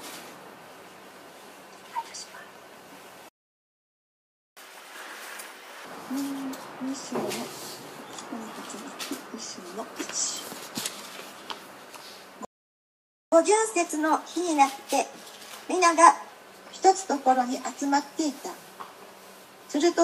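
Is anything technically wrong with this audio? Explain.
Yes. A playback stall cuts the sound to silence from 3.29 to 4.57 s (1.28 s) and from 12.45 to 13.32 s (0.87 s), likely because the player ran dry of buffered data; unlike a dropout, the sound resumes where it stopped.

Catch-up at higher speed follows each stall as the player resamples its backlog: from 4.57 to 5.85 s at 2× speed, with pitch raised around ten semitones, then 13.32 to 16.32 s at 1.1×, about a semitone and a half higher. Speed and pitch rise together, which sets it apart from a time-stretch.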